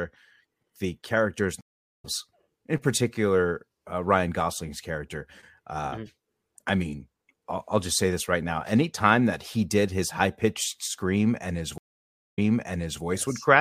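Speech that drops out twice. After "the characters" it drops out between 1.61 and 2.05 s (376 ms of silence) and comes back about 0.4 s further on, skipping material. After "his high pitched scream" it drops out between 11.78 and 13.03 s (541 ms of silence) and resumes 705 ms earlier, repeating material. Both are stream reconnects. The connection broke, the player restarted its decoder mid-stream, and playback picked up at a different point, ahead in the first case and behind, from a resent burst, in the second.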